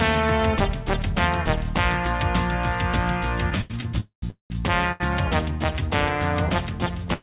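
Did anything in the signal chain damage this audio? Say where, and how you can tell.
Yes. Repeated stalls (stutter) run from 3.50 to 3.84 s: the sound catches four times, with about 124 ms of held-over sound in total and the longest gap 86 ms, so roughly a third of that span is filler. The stage is the network and the receiver's jitter buffer. Packets kept arriving behind the playout clock, the buffer drained repeatedly, and the receiver extended the last sound each time before resuming. Nothing is lost, but the passage drags and judders.

Two call audio freezes follow, at 4.00 to 4.24 s and 4.30 to 4.52 s. Each begins as a continuation of the preceding sound that fades out and then drops to silence for about 120 ms and 130 ms. That pushes the audio back by 219 ms and then 198 ms before it picks up exactly where it stopped. The likely cause is packets held up in the network long enough to empty the jitter buffer outright, with concealment running out and leaving dead air as inserted gaps.

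A short stall from a late packet appears at 4.92 s and again at 7.13 s, right at the end of the clip. Each time a sound is held too long, for 80 ms and then 95 ms. A single packet missed its playout slot, the buffer stretched the last sound until it arrived, and playback continued from the same point. This happened within the band-limited call path, where nothing above 4 kHz survives, consistent with narrowband G.711 A-law.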